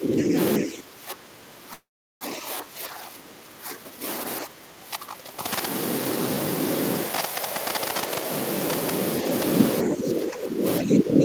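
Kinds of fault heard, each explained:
Speech suppressed in double talk, 0.0–0.36 s, 0.59–4.04 s, 4.45–5.44 s and 9.84–11.24 s: the level of the speech sinks by about 10 to 15 dB in these stretches, deepest in the second and third, and in places thins or breaks up. This is likely an echo canceller that, with the far side talking at the same moment, could not tell the near talker from loudspeaker echo and pulled both down together.
Call audio freeze, 1.73–2.23 s: the sound stalls for nearly half a second, with the last fragment carried on briefly before about 0.38 s of silence, then picks up exactly where it stopped with nothing lost. The likely cause is delayed packets emptying the jitter buffer, so the receiver padded the wait and everything after runs about 475 ms later than before.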